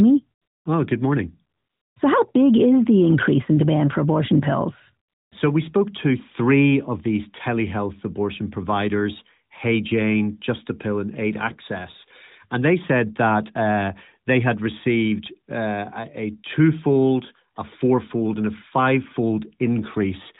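A steady, smooth hiss replaces the real background in three short pauses in the speech: 0.42 to 0.66 s (240 ms), 1.58 to 1.96 s (380 ms), and 5.08 to 5.32 s (240 ms). Each patch switches in and out abruptly. This is AMR comfort noise. The phone judged the talker silent and stopped sending speech frames. The receiver filled each gap with synthetic noise built from a rough level and spectrum estimate, all within the narrowband AMR channel.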